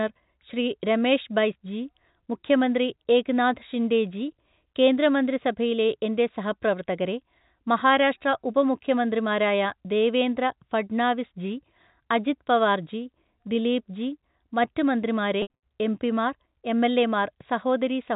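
From 15.42 to 15.61 s, packet loss with pitch repetition: 160 ms dropped in gaps up to 80 ms, each bridged by a repeated pitch period that buzzes, the longest fading toward silence.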